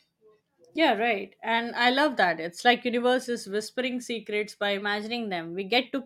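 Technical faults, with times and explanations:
4.78–5.85 s, drift correction step: just after "is whispering secrets by", the speech abruptly plays 6.3% fast and 105 cents sharp, then snaps back, likely a clock-matching resampler jumping rate to rebalance its buffer. On a spectrogram, all harmonics step up together; waveform periods visibly shorten.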